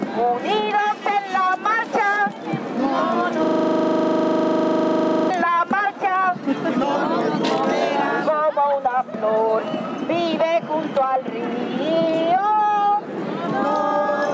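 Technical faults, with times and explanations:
Throughout: gain pumping. The level swings by about 15 dB, likely from gain set too high feeding a fast limiter.
3.45–5.30 s: system hang loop. A 40 ms slice repeats exactly at 25 Hz, giving a steady buzz, as the hardware kept replaying its buffer while the system froze.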